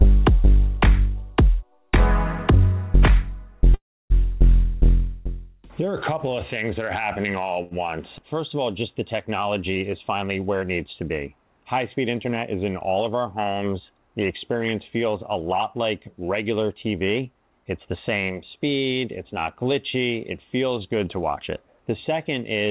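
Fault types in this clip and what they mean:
Call audio freeze: Packets were likely held up in transit long enough for the jitter buffer to run dry, so the receiver had nothing new to play. From 3.74 to 4.12 s the last sound is carried on briefly and then gives way to about 300 ms of silence, 360 ms of filler in all. When the packets resume, the audio picks up exactly where it stopped, with nothing lost and the playback now running 360 ms later than before.
Short stall from a late packet: A single packet missed its playout time, leaving the jitter buffer momentarily empty. The receiver bridged the gap by stretching the final sound it had, so at 7.63 to 7.73 s a sound lingers 80 ms too long, with a slight buzzy or dipped quality. Once the packet arrives the audio continues from the same point, so nothing is skipped but the delay grows by 80 ms.
Jitter buffer speed-up: The jitter buffer held more audio than its target, so the receiver trimmed it back by cutting out tiny pitch-period-sized slices in quick succession. 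From 11.96 to 12.53 s playback runs at 109 percent, shedding roughly 70 ms, and from 16.73 to 18.17 s at 108 percent, shedding about a tenth of a second. The pitch stays put, but those stretches sound noticeably hurried.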